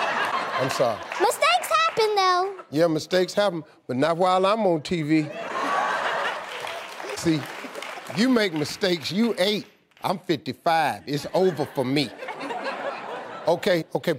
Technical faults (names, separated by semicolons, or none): broken MP3 bit reservoir